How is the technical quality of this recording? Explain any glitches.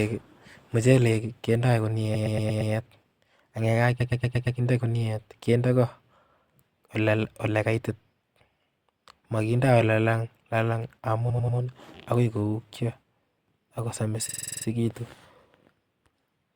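The speech is marred by four stutters from repeated frames. At 2.14–2.72 s and 4.00–4.58 s, a 116 ms block replays five extra times. At 11.29–11.57 s, a 93 ms block repeats three times. At 14.28–14.65 s, a 46 ms block loops eight times. The same compressed stretch was sent again, so the decoder replays it.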